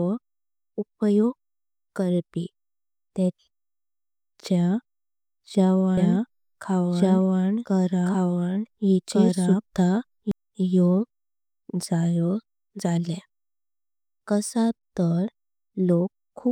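From 5.97 s to 10.31 s, the speech is heard twice: a doubled audio track. A second full-band copy trails about one and a half seconds behind, at roughly equal level, with no decay. It starts and stops abruptly. Likely a slower second capture path.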